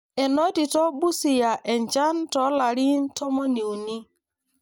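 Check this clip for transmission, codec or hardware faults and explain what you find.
One fault is audible, a channel delay causing comb filtering. From 3.17 s to the end, one channel lags the other by around 10 ms, and the mono sum cancels at evenly spaced frequencies, starting in the low bass near 40 Hz. The speech turns hollow and phasey.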